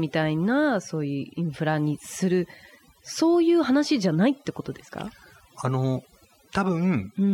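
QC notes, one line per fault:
Throughout: overdone noise removal. Aggressive noise reduction gates bands near the noise estimate, leaving near-silent gaps with twinkling specks and taking quiet parts of the voice with them.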